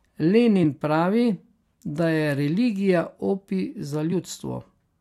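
At 0.63 s, and again at 4.11 s just after "da je religija opij", the speech is broken by a short blip, each lasting only about 10 to 15 ms. Both are damaged data in a compressed stream. Corrupted bytes left the decoder unable to read the affected frames correctly, so it lost sync and had to search for the next valid frame header. The misdecoded fragment comes out as a brief chirp, squawk, click or short hole.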